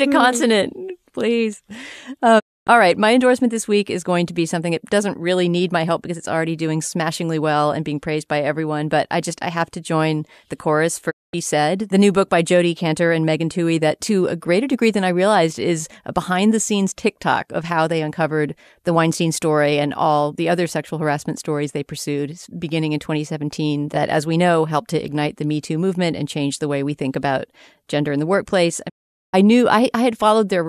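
Three digital broadcast dropouts break up this speech: at 2.38 s (gone about 264 ms, just before "all right"), at 11.09 s after "to join the chorus" (216 ms), and at 28.88 s after "gender in the workplace" (432 ms). Each time, the receiver mutes on bad frames with a quick 20 ms fade, so that stretch is simply lost.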